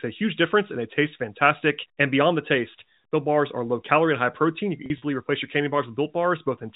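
Held, buzzy speech at 4.86–5.02 s, before "replace your candy": packet loss with pitch repetition, 80 ms of short gaps bridged by repeating pitch periods.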